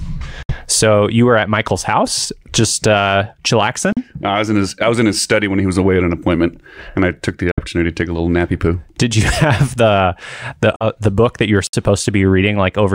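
Bluetooth dropout at 0.42 to 0.52 s: the speech falls silent for about 61 ms and then picks up further along, as though it had kept playing during the gap. This is most likely audio packets missing their delivery window to the headphones and being discarded, with the hole's length suggesting about four lost frames.

Block of digital silence at 3.93 to 3.97 s: a 43 ms stretch drops straight to silence with no fade. A gap of that length fits a 2048-sample buffer the program failed to fill in time.

Bluetooth dropouts of the same kind follow at 7.51 to 7.63 s, between "and I took the" and "to take a little", about 61 ms lost, and at 10.76 to 10.87 s, between "have the the" and "the book that you", about 46 ms lost, which points to roughly three frames.

Block of digital silence at 11.67 to 11.73 s: right after "book that you were", a 64 ms hole cuts in and out abruptly.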